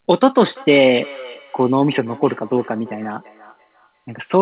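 From 0.44 s to the end there is feedback echo between two devices. Each phrase returns as a distinct copy at a fixed spacing of roughly 300 ms, peaking about 22 dB below the speech, thinner and more ringing each pass. Room reverberation smears continuously, but these repeats stay separate and evenly spaced.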